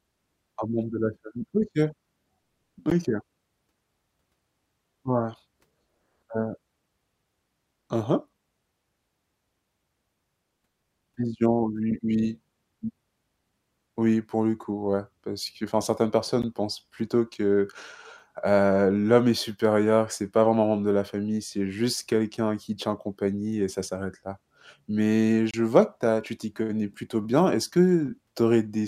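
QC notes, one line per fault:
2.90 s, 16.42 s and 25.51–25.54 s, Bluetooth dropout: brief holes of silence, about 13 ms, 13 ms and 27 ms, with sound resuming as if it had kept playing, likely from one or two lost wireless packets.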